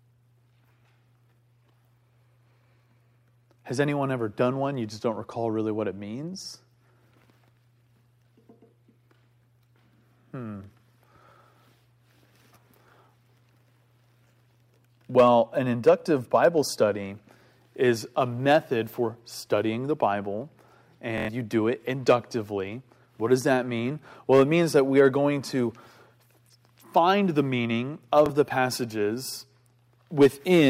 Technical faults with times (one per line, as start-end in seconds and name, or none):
21.18-21.29 Bluetooth stutter
28.26-28.30 Bluetooth stutter